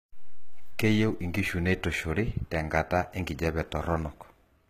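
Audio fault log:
Throughout, HE-AAC compression: the encoder likely coded only the lower spectrum and rebuilt the treble by spectral band replication, copying lower bands upward under a coarse envelope, with the damage plainly audible. The result fits a low bitrate around 20 kbps. The speech keeps a bright top, but its upper harmonics no longer line up with the real ones, so s sounds come out gritty and lispy, with a metallic sheen, and nothing is present above 14.9 kHz.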